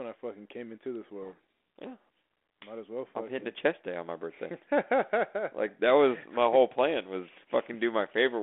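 From 1.22 s to 1.79 s, right after "fucking came into this", the speech is buried under harsh, grinding distortion: a codec payload misread. The decoder is unpacking the G.726 code words with their bits in the wrong order, so each sample's difference value is misread and the adaptive prediction is driven off course. Outside that span the same 32 kbit/s G.726 line, band-limited to roughly 250 Hz to 3.5 kHz, carries only light coding roughness.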